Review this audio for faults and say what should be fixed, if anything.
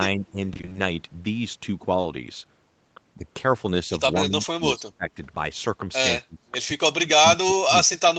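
The echo canceller likely misjudged double talk, treating the near-end talker as loudspeaker echo and turning it down, so this is speech suppressed in double talk. The level dips by about 5 dB at 0.17–0.36 s and 3.16–3.20 s. It then cuts deeply, by about 25 dB at 4.24–5.17 s and about 30 dB at 6.2–6.5 s and from 6.96 s to the end, so the speech fades or breaks into pieces. To prevent it, tune the canceller's double-talk detection so near-end speech is preserved while the far end is active.

Between 0.53 and 0.77 s the network repeatedly failed to deliver audio in time, causing repeated packet loss (robotic sound). The receiver kept patching short holes, none longer than 20 ms, by extending the preceding sound. Half of that quarter-second is synthetic fill, which fits a run of lost 20 ms packets. The result is a choppy stretch with fragments missing. To prevent it, improve network stability and enable forward error correction or a deeper jitter buffer.

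At 2.01–2.05 s a single 20 ms chunk arrived too late for the decoder, a short concealed packet loss. The receiver bridged it by continuing the previous sound and blending back into the real signal, which leaves a brief smear or wobble where a short sound may drop out. To prevent it, apply the same network and error-correction measures used against the longer loss burst.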